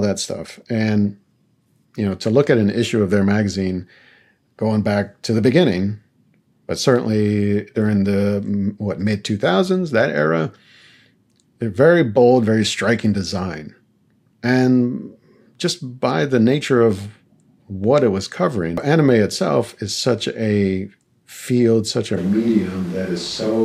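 A switch to a distant microphone at 22.19 s in this speech clip, lasting to the end, abruptly turns the voice roomy and hollow with thinner bass and audible background noise about 25 dB below the speech, at a similar overall level, likely because the close microphone dropped out.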